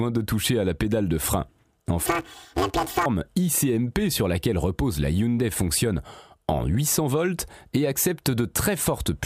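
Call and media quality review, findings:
Planar audio read as interleaved, 2.06 to 3.06 s: speech turns to a robotic buzz near 188 Hz, pitch otherwise unshifted. Probable component: output or resampling stage misreading per-channel blocks of about 5.33 ms, consistent with 256-sample blocks. Each block plays twice at double speed. Distinguishing mark: the buzz tracks the block rate with no octave jump, unlike longer-block misreads that sound an octave high, and unlike packet loss, which leaves gaps rather than a steady buzz.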